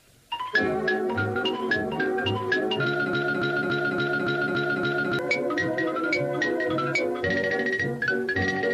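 From 3.13 s to 5.19 s the sound falls into a broken-record loop: a single 283 ms fragment plays seven times back to back, identical each pass, before normal audio resumes. The likely cause is a stalled player, encoder or stream resending its last held fragment, so whatever belonged in those two seconds is gone. Unlike an echo, the repeats don't fade, and unlike stutter or dropouts, there's no gap.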